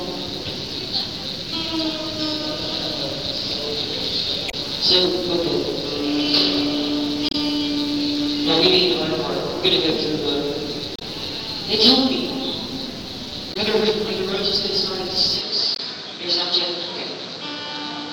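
Damaged data in a compressed stream causes short glitches at 4.48–4.54, 7.29–7.35, 10.96–11.02 and 13.53–13.57 s. Each time, the decoder misreads corrupt frames, which is unlike a clean dropout. From 15.41 s the sound turns dull, stops above 8.2 kHz, drops about 5 dB and picks up new noise with no gap, likely from the input switching to a poorer device. One more glitch occurs at 15.75–15.80 s.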